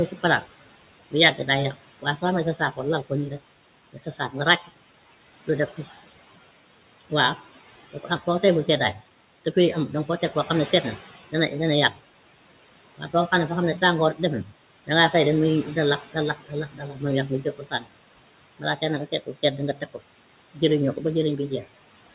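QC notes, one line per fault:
Throughout, noise suppressor artifacts. The room noise sits about 16 dB below the speech. The suppressor pulls it down by about 17 dB in the gaps, then lets it back up under the speech.
0.07 to 21.66 s, speech cut by the noise suppressor. The suppressor mistakes quiet parts of the speech for noise and lowers them with it, by up to about 18 dB. Roughly four seconds in all are affected. Soft consonants and word endings sound swallowed, made duller by the 4 kHz upper limit of the call path.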